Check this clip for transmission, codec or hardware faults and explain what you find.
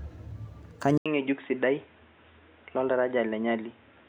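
One fault is present: at 0.98 s the input appears to switch to a poorer device, which most likely explains everything that follows to the end. The system stops capturing from one microphone and starts recording through another, narrower-band input. After a gap of 80 ms, the speech returns with nothing above 3.8 kHz, so it sounds dull and boxy. It is also about 5 dB quieter and carries a new noise floor of roughly 35 dB below the speech.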